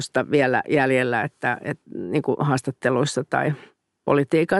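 A short speech recording with no technical faults anywhere in the signal.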